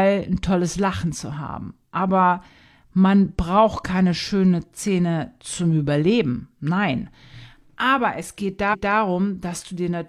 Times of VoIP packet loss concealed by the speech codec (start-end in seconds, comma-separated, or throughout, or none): none